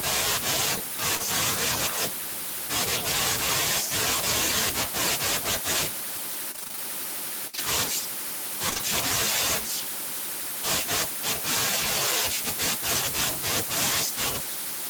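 At 1.17 to 1.21 s there is a short concealed packet loss: about 20 ms of the stream arrived too late to decode, and the receiver bridged it by extending the preceding sound before blending back in. It is heard as a brief smear rather than a silence. It is a single isolated patch, unlike the clustered losses later, so it never builds into a rhythm.

From 6.51 to 6.79 s there is repeated packet loss, and the sound turns robotic and choppy. Seven separate gaps fall within this 0.28 s stretch, none longer than about 26 ms, and concealment fills roughly half the span. That leaves about 140 ms of real audio missing. Each gap alone would resemble the earlier smear, but they recur too closely for the signal to settle, which produces the choppy, stuttering texture.

At 7.47 to 7.55 s a burst of packet loss removes about 60 ms at once. The fill is stretched over that longer hole and decays as it goes, so it is heard as a held, fading continuation followed by a jump to later audio. 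It lands as one sustained dropout rather than a flutter. A further short concealed packet loss follows directly at 7.55 to 7.59 s, covering another 20 ms.

Three short concealed packet losses then run back to back at 8.69, 8.73 and 8.77 s, each about 20 ms and ending at 8.81 s. Together they produce a brief, wobbly smear.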